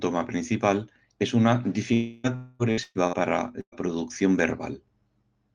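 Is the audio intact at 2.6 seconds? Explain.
No. From 2.36 to 2.62 s a long network dropout likely cut off the incoming audio; the receiver filled the gap by stretching the last sound into a fading buzz, and about 240 ms of content is lost. A spectrogram shows smeared, decaying harmonics there.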